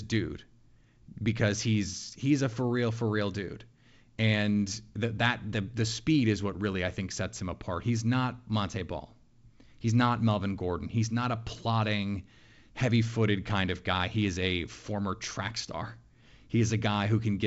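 Nothing's wrong here that I can pick out: it's speech carried over G.722 wideband telephone coding at 64 kbit/s, with the top end stopping around 7.7 kHz as you'd expect from that path, and no faults turn up anywhere in it.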